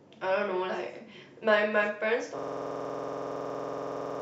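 From 2.39 s to the end, the speech collapses into a rapid, mechanical stutter: one 46 ms fragment repeats exactly, roughly forty times, at about 21.5 Hz, sitting between a buzz and a machine-gun rattle. This is a system hang loop. The computer or audio driver froze, while the sound hardware went on replaying whatever was left in its ring buffer. The loop length fits a 2048-sample buffer.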